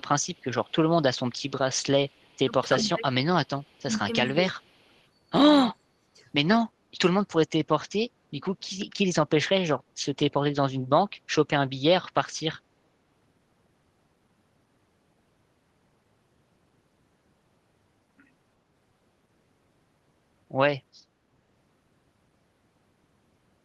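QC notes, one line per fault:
0.00–0.72 s, 2.09–2.84 s, 3.61–3.77 s, 4.95–5.05 s: echo leak. A delayed copy of the speech returns about 358 ms late. It is very faint in most scraps, and louder at 2.09–2.84 s, roughly 20 dB down. A loudspeaker echo likely slipped past the far end's canceller.
2.37–4.94 s, 5.70–6.23 s: speech suppressed in double talk. The talker's level dips in pieces while the other side speaks, about one second in total in the first stretch and half a second in the second. The deepest drops reach roughly 20 dB and 30 dB. The canceller likely ducked both sides at once.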